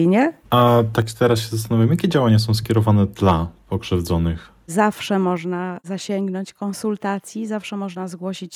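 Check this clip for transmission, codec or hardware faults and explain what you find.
Two faults are present, both pointing to an input level set too high.

Microphone overload occurs at 0.57–0.62 s, 0.98–1.33 s, 1.82–1.85 s, 2.14–2.35 s, 2.77–2.92 s and 3.23–3.31 s. Peaks run up to about 4 dB past full scale, so their tops are flattened, most likely at the converter, giving the loudest syllables a harsh, crackling edge.

Microphone volume stepped down at 1.02 s and again at 5.37 s, each time by about 4 dB. Voice and background drop together in one abrupt step, likely the call software reducing device input gain after detecting clipping, as the first step follows directly on distorted peaks.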